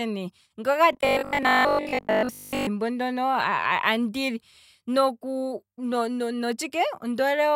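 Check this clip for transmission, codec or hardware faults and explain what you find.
One fault, in the speech from 0.93 to 2.67 s: robotic sound from repeated short buffers. The likely cause is a stream starved of new audio, with the playback side looping the last fragment to fill the gaps while real audio is dropped. Most of that stretch, roughly 70 percent, is repeated material, and the loop imposes a fixed buzz at 50 Hz, which fits a 20 ms buffer. The voice becomes a rigid, metallic drone that only loosely tracks the speech.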